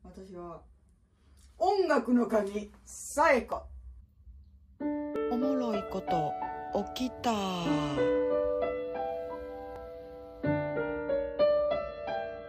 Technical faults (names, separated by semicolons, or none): dropped buffer (overrun)